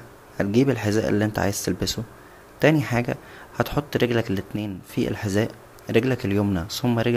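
Just after "تانى حاجه هتحط رجلك", from 4.56 to 4.89 s, the level drops abruptly by about 6 dB for a third of a second before "فى الحذاء". This is likely one channel dropping out, halving the mono sum. The waveform shows a sudden step down, and the spectrogram a uniform darkening across all frequencies.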